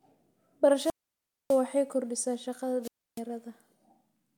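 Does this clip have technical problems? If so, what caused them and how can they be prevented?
Yes. Two wireless microphone squelch dropouts occur, at 0.76–1.63 s (ending just before "kordhisaa shaqada") and 2.82–3.21 s (just after it). The radio link fades, hiss rises, then the receiver's squelch mutes the output for 0.60 s and 0.30 s. These show as broadband noise smears followed by flat waveform gaps. Keeping the transmitter in clear line of sight of the receiver, with fresh batteries, prevents this.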